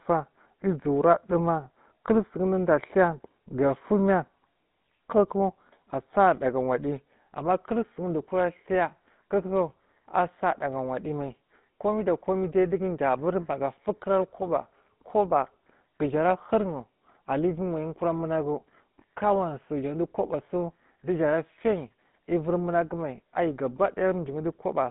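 GSM full-rate codec throughout the speech: pulse-excited vocal-tract modelling adds a plainly audible buzzy, gravelly roughness, confined to a 150 Hz to 3.7 kHz band.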